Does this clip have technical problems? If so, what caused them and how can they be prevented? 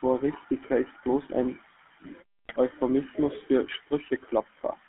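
Yes. The speech went through the GSM full-rate codec, which fits a 13 kbps stream. It models the vocal tract and excites it with a thinned pulse train, and the line passes only about 250 Hz to 3.4 kHz, so the voice sounds narrow, buzzy and gravelly throughout. Using a wideband or modern codec such as AMR-WB or Opus prevents this.

From 2.45 to 2.59 s, GSM bit errors on a weak link corrupted the decoder's filter, pitch and gain values over several consecutive frames. For that moment the spectrum warps and the level jumps, producing squawks, pops and gargling. Better signal strength or stronger channel error protection prevents it.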